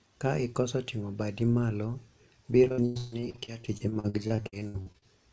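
Choppy, robotic speech with missing pieces runs from 2.64 to 5.04 s. This is repeated packet loss: 28 gaps up to 144 ms, about 40% of the stretch patched by extending earlier sound. The band stops at 8 kHz, fitting a wideband call codec.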